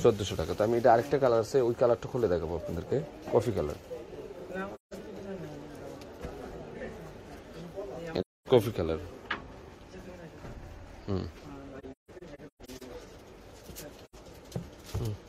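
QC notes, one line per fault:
4.75–4.94 s, 8.20–8.48 s, 11.79–12.83 s, 14.04–14.15 s: AAC frame loss with muting. Soft-edged silent holes of roughly 170, 256 and 85 ms. Between 11.79 and 12.83 s, about half a second of shorter gaps is scattered, the longest about 150 ms. The decoder zeroes each missing frame, and the overlapping windows fade the sound out and back in. That distinguishes them from hard dropouts.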